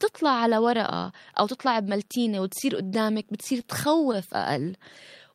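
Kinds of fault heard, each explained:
Scattered short gaps: between 3.23 and 4.16 s, about five lost or late packets were each patched by extending the preceding sound, around 50 ms concealed in total. Each gap lasts no more than roughly 15 ms, heard as brief ticks or smears within otherwise continuous speech.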